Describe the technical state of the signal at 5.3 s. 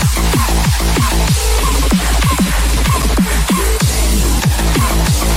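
At 5.3 s the audio is intact, with no dropout, distortion, glitch or other fault to be heard.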